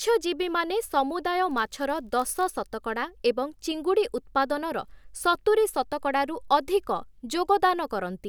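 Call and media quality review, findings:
Block size mismatch (padded), 1.49–2.44 s, speech, ending just before "ଶତକଡ଼ା ଏବଂ ଚିଙ୍ଗୁଡ଼ି ଉତ୍ପାଦନର". Symptom: steady buzz at 46.9 Hz riding on the audio, pitch unchanged, timing essentially unaffected (speed 0.999). Probable component: buffer handoff between two processing stages. Mechanism: the writing stage delivers slightly short blocks and the reading stage zero-fills the remainder, leaving a brief gap every block. The buzz rate fits a 1024-sample read block at 48 kHz.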